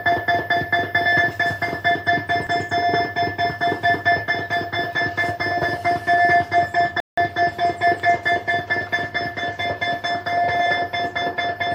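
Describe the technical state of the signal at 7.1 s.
At 7.1 s the sound falls to silence from 7.00 to 7.18 s (173 ms), likely a Bluetooth stall: delayed packets emptied the headphone buffer. The gap is total silence, not a click or garbled burst.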